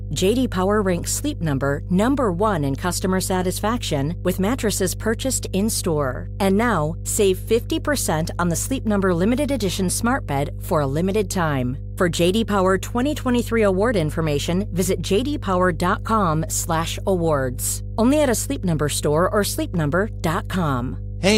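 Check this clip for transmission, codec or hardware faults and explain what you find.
There is one fault, present for the whole clip: a steady low drone sits under the speech from start to finish. This is mains hum at 50 Hz, loud enough to come close to the level of the speech itself rather than lurking far beneath it. Power-line energy has leaked into the signal path, most plausibly through a ground loop between connected equipment or from a transformer close to the cabling, and the 50 Hz fundamental with its low harmonics gives it that buzzing, electrical character.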